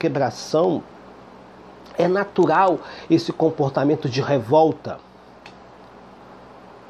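No technical fault can be heard anywhere in the audio, which stays continuous and stable over its whole duration.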